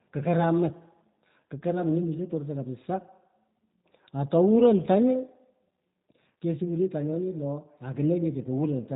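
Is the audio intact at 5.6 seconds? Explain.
No. At 5.6 seconds the speech carries G.729 codec damage, which runs through the whole clip rather than appearing at that moment alone. The codec rebuilds each 10 ms frame from a vocal tract filter, a pitch predictor and a handful of pulses, a sparse model that fits an 8 kbit/s stream. Everything above about 3.8 kHz is gone, so the speech sounds muffled and plainly rough and synthetic, though still intelligible.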